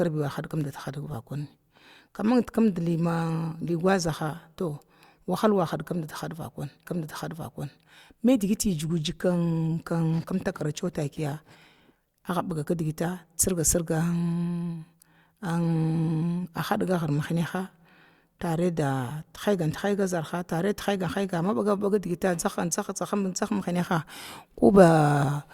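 At 6.85 s the player fetched or queued the same stream segment a second time, so a stream segment repeated: one full second of the speech, running to 7.85 s, is played again immediately after it first ends. The listener hears that second of speech twice in succession, with a brief blip at the seam where playback jumps back to the start of the duplicated segment. The repeat adds a full 1 s to the running time.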